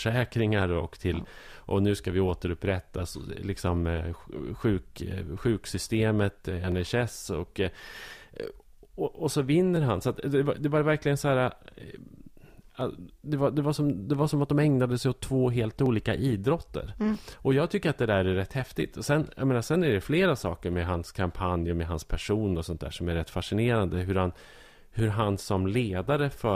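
Clock drift buffer slips, 0.62 to 25.0 s, speech: about ten clicks recur every 3.04 s, likely two clocks roughly 200 ppm apart, dropping or repeating a few dozen samples.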